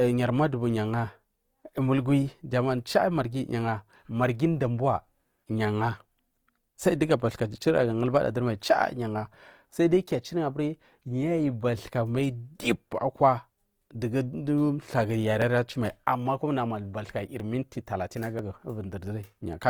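From the start, the speech sounds grainy and rough, with noisy, smeared high frequencies, likely Opus compression in its CELT music mode at a rate around 24 kbps. A spectrogram shows energy reaching about 20.2 kHz, filled with noise rather than clear harmonics.

From 15.42 s to 19.38 s, periodic USB or driver dropouts produce sharp ticks every 0.99 s, about five in all. Each skips roughly 10 ms of audio, so the waveform shows abrupt splices and the spectrogram shows thin vertical broadband lines.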